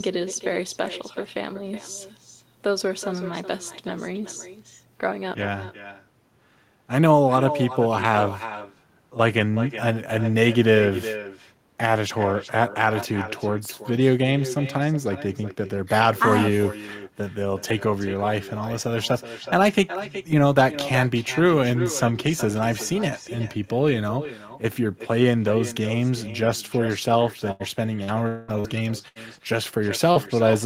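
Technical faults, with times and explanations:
Throughout: echo with no canceller. Every phrase returns roughly 0.4 s later as a quieter copy, about 13 dB below the speech. It sounds thin. The far end is playing the call through a loudspeaker. Its microphone picks that sound up again. Nothing at that end subtracts it, so the speech travels back across the network. The delay is the full round trip. The thin character comes from the speaker and the room.
27.51 to 27.63 s and 29.08 to 29.18 s: burst of packet loss. Each time, the speech stops being real for about a tenth of a second. It turns into a held buzz or a fading hiss. Roughly 80 ms of audio is gone in each case. The receiver stretched the last sound it had and let it sink in level as the gap went on. Then the speech picks up further along, with that stretch absent.
28.04 to 28.11 s, 28.60 to 28.67 s and 30.11 to 30.18 s: short concealed packet loss. 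Each is a brief smear or wobble lasting a few hundredths of a second. About 40 ms failed to reach the decoder in time each time. The receiver patched the hole from the preceding sound. It carried pitch forward on voiced parts and shaped noise on the rest. Then it crossfaded back into real audio. A short consonant inside one of these patches can simply disappear.
28.28 to 28.51 s: long network dropout, likely. For about 0.2 s the speech is replaced by a continued buzz or hiss that fades away. There is no full silence before the speech returns further on. Around 200 ms never arrived. The receiver kept extending the last sound across the whole gap. It sits in a cluster of losses from 27.5 to 30.2 s, which points to a struggling connection.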